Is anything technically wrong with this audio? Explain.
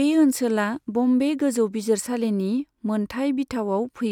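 Yes, there's one fault. At 0.53 s, just before "बम्बे गोजौ", there's a single sharp click, likely dropped samples: roughly one sample vanishes, so the waveform jumps abruptly to a later value.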